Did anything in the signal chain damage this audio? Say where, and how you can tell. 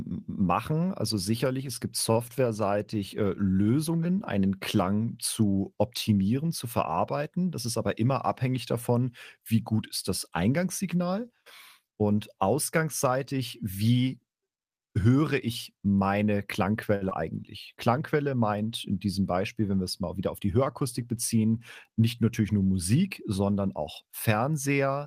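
Yes. The damage is in the network and jitter-buffer stage of a packet call, in three kinds.

Short stalls from a late packet occur at 2.11 to 2.17 s, right after "also sicherlich es gibt", and at 16.95 to 17.03 s, after "höre ich meine". In each, a sound is held unnaturally long, by about 36 ms and then 60 ms, with a faint buzzy sustain. The buffer ran dry, so the receiver stretched the last sound until the packet arrived, then resumed without losing anything.

A jitter buffer speed-up runs from 7.46 to 7.87 s, just before "immer abhängig davon wie". The speech briefly sounds hurried, at roughly 107% speed, while the pitch stays unchanged. The receiver had built up excess delay and trimmed it by cutting out short pitch-period pieces repeatedly, removing about 40 ms in total. That is why the pace jumps and the pitch does not.

Short concealed packet loss follows immediately at 17.09 to 17.13 s, right after the second stall. 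About 40 ms of speech never reached the decoder. The receiver filled the gap by extending the preceding sound, then blended back into the real signal. The result is a brief smear or wobble with a slight skip forward. The net effect is a shorter playout than the gap, which also pulls back some of the delay the stall had added.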